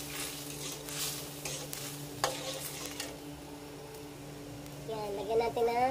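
Four sharp, isolated ticks cut through the sound at 0.89, 1.73, 2.86 and 4.66 s. The first three peak at about -11 dBFS and the last is quieter, at about -23 dBFS. Each is a bit error spike: a flipped bit in memory or on a digital link throws one sample, or a few in a row, off by a power of two before it snaps back. The result is a broadband click with no relation to the surrounding audio.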